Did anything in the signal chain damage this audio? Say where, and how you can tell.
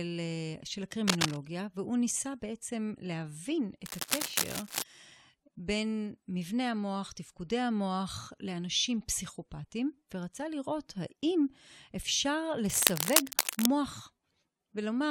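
Yes, cable scratch noise in the analogue wiring. Dense, uneven rustling bursts sit over the speech at 1.07–1.37 s, 3.86–4.83 s and 12.65–13.70 s, roughly as loud as the speech itself. It's likely a worn cable or connector being moved, its contact resistance jumping around.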